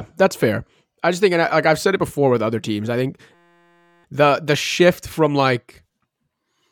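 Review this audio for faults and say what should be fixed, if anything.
A system hang loop runs from 3.34 to 4.04 s, between "other teams I think" and "the the shift from". A 5.8 ms slice, which fits a 256-sample ring buffer, repeats 120 times and produces a steady 172 Hz buzz. The waveform shows one identical cycle tiling the whole stretch, and the spectrogram shows flat harmonic lines at multiples of 172 Hz. A watchdog that mutes output when the driver stops refilling the buffer would prevent it.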